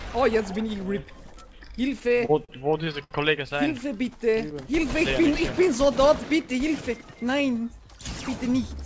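From 2.00 to 3.13 s there's a run of repeated stalls (stutter): about a dozen brief hangs where packets came late and the receiver stretched the last sound, the longest about 68 ms, so it drags. Then 4.11 to 4.85 s is a jitter buffer slow-down, with pitch periods repeated to rebuild the reserve, playing at 92% speed and adding 66 ms. At 6.89 to 7.43 s a jitter buffer speed-up trims around 50 ms of pitch periods, so it rushes along at 108% with pitch unchanged, all over a band that stops at 8 kHz, which fits a G.722 call path.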